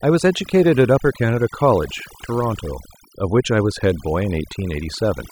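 Speech runs the full clip with overdone noise removal throughout: an overly aggressive noise reducer pulls individual frequency bands down whenever they approach its noise estimate, leaving the background lowered with twinkling specks, while quieter speech components vanish.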